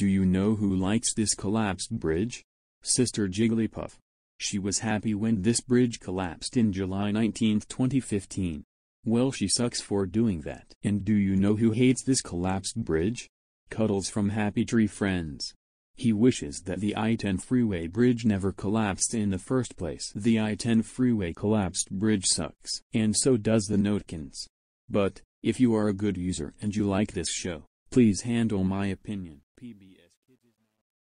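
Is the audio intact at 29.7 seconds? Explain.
No, there's truncation distortion on the fade from 28.93 s to the end. The fade-out, starting around 29 s, is being stepped down without dither, which fits roughly 11-bit resolution, so the tail turns gritty, worst from 29.77 s onward.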